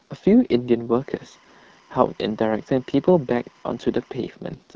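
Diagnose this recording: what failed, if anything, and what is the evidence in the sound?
The codec stage failed throughout: the speech has the rough, raspy texture of the AMR wideband (HD Voice) codec at one of its lowest modes, which fits the 8.85 kbit/s rate. Below 6.4 kHz the pulse-excited vocal tract model cannot track the voice closely, so it sounds gritty. Above that, the band is filled with shaped noise rather than real detail. This sets it apart from MP3-style damage, which sounds swirly and smeared rather than buzzy.

From 1.0 to 4.2 s, analogue wiring leaks timecode bleed into the audio. A steady chirping warble sits about 35 dB below the speech and flips between tones around 1 and 2 kHz. It toggles at a rhythm that fits 25-frame linear timecode on an adjacent track or cable. Its two alternating pitches and its clocked, data-like pattern set it apart from mains hum or a single steady whine.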